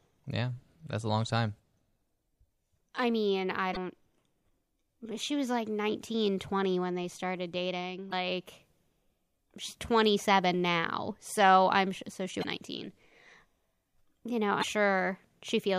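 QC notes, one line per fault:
1.56–1.59 s (after "that's a long time"), 3.73–3.77 s (after "I mean I"), 8.09–8.13 s, 12.40–12.44 s (after "I'm so she"), 14.59–14.64 s, damaged data in a compressed stream: corrupted bytes make the decoder misread frames and lose sync, leaving brief 30–45 ms glitches in the speech.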